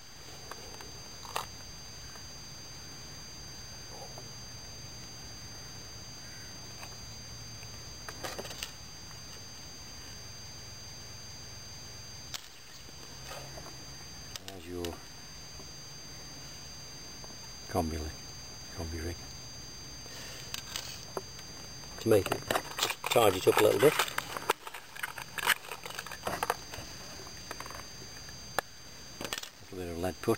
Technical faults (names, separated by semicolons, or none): broken-record loop